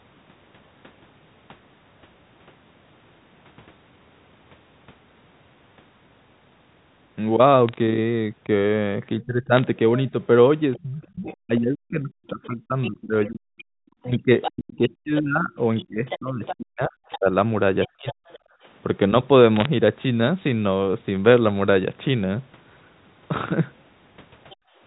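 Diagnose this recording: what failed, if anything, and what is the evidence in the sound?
The digital line shows bit errors in three short bursts of sharp ticks and crackle, at 7.69–7.80 s, 9.57–9.67 s and 19.56–19.66 s. This is a transmission-stage fault. On a G.711 A-law path each flipped bit corrupts one sample, and hits on the sign or upper bits jump the waveform hard enough to click. The error rate works out to a fraction of a percent, nearer one percent in the last burst.

From 9.2 s to 18.28 s the talker keeps dipping, dulling and breaking up, for roughly five seconds in total, with the deepest holes around 40 dB down. That points to speech suppressed in double talk in the call processing. With both ends talking, the echo canceller likely couldn't tell the near talker from the loudspeaker echo, so it clamped down on everything, and the near voice got attenuated in chunks.

Overlapping that stretch, from 10.74 s to 18.39 s, a second voice sits roughly 10 dB under the talker. 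There's another tiny scrap of it at 24.50–24.56 s, far quieter at about 30 dB down. That's the other side's voice leaking through, likely residual echo the canceller failed to subtract from the mic feed, so the far end's voice playing on the talker's loudspeaker gets sent straight back.

The room tone drops out twice: a brief hole at 18.56–18.64 s, about 21 dB deep, and a longer one at 24.56–24.80 s, around 36 dB. That's background gated by the echo canceller. While it thought the loudspeaker was active, its suppressor slammed the mic gain down, taking the ambience with it, then released. The second gate follows right on the little leak at 24.5 s, which fits that.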